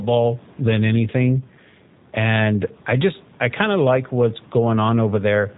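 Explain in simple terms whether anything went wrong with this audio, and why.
The whole recording went through the G.729 codec, a low-rate internet phone codec. It rebuilds speech from a simple model of the voice instead of keeping the real sound. Nothing above 4 kHz survives. So from start to finish, the speech sounds dull, rough and slightly synthetic.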